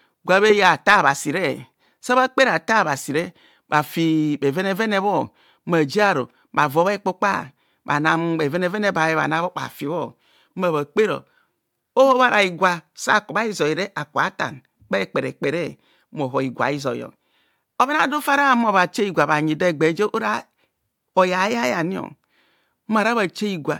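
No audible technical faults.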